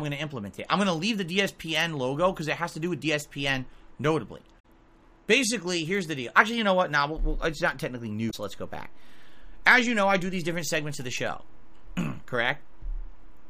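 From 4.56 to 4.65 s and again from 8.27 to 8.34 s, the sound breaks up briefly. This is damaged data in a compressed stream: the decoder misreads corrupted frames, loses sync and hunts for the next frame header. Unlike a simple dropout, the disruption arises inside the decoding itself.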